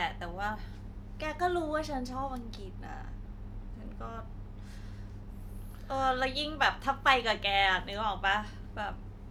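No technical faults can be heard anywhere in the recording.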